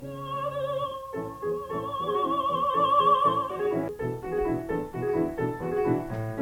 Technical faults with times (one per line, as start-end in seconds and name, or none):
3.88 CD skip